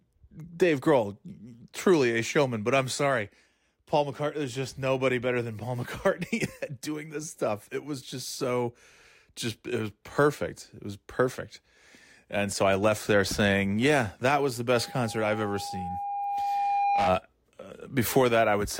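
Right after "yeah that was the", a steady 807 Hz tone swells over roughly two seconds into a squeal that ends up a few decibels louder than the speech, from 14.74 to 17.14 s. This loudspeaker feedback squeal arises when the microphone picks up its own loudspeaker and the loop gain exceeds one at that frequency.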